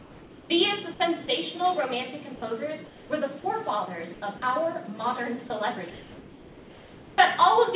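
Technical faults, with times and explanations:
0.0–0.5 s, 2.86–3.1 s, 4.14–4.22 s and 5.9–7.18 s, comfort noise in place of the background: discontinuous transmission likely halted sending during pauses, so steady, featureless synthetic noise, about 2 to 4 dB quieter, replaces the real background.
1.26–1.28 s, 2.36–2.42 s and 5.48–5.5 s, sound dropped by the voice detector: the detector likely mistook quiet sound for background, so 10 to 30 ms of sound vanishes into steady noise.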